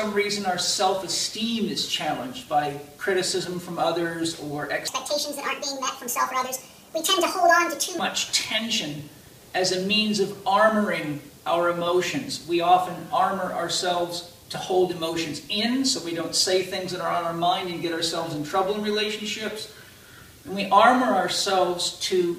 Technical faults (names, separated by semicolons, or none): section at the wrong speed